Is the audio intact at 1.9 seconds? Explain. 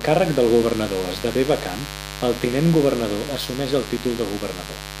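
No, mains buzz runs through the whole clip, including 1.9 s: switching spikes twice in every 50 Hz mains cycle add a raspy harmonic buzz, unlike smooth hum, only about ten dB below the speech.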